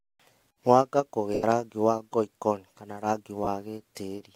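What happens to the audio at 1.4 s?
Bluetooth LE Audio frames were lost from 1.34 to 1.43 s, about 90 ms. The LC3 decoder filled the gap by replaying the last spectrum with randomised signs, fading it after the first few frames, so the speech briefly smears into a hissy, dimming blur.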